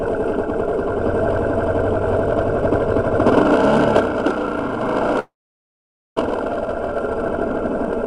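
From 5.19 to 6.20 s a fading buzz decays to silence, then sound resumes 0.6 s further on, skipping material, likely a long network dropout.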